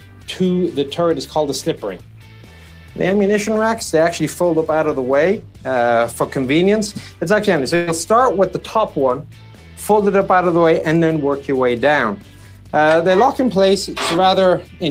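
At 7.75 s there's a burst of packet loss running to about 7.89 s. Roughly 120 ms of audio never arrived, and the receiver papered over it by stretching the last sound and fading it down. You hear a brief held, dimming smear, then the audio jumps ahead.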